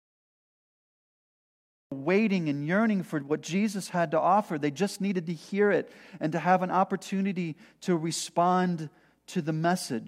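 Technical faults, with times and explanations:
0.00–1.92 s, cut-off start: the capture or stream came online late, so nothing was recorded for the opening 1.92 s and the file holds pure digital silence there. At 1.92 s the audio jumps straight into speech already in progress, just before "waiting and yearning for", with no natural attack or fade-in. The missing lead-in makes the speech seem to begin abruptly, as if the first part of the phrase had been sliced away.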